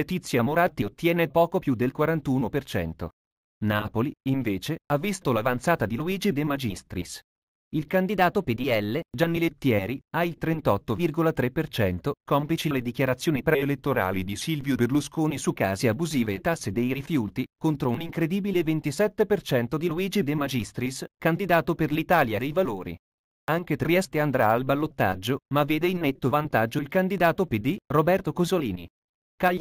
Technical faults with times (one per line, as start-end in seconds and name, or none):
8.08-9.11 drift correction step
13.51-15.19 drift correction step